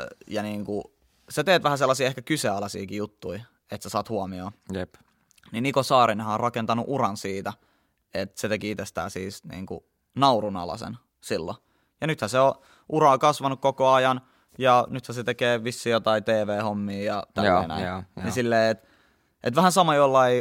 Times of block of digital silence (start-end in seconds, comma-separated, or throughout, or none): none